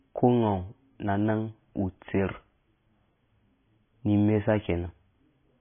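It's a short speech clip with heavy MP3 compression damage all the way through. Nothing comes through above 3.5 kHz, and the sound has that watery, swirling quality with metallic chirps on s sounds. That's likely an encoder starved of bits, which fits a very low bitrate around 16 kbps.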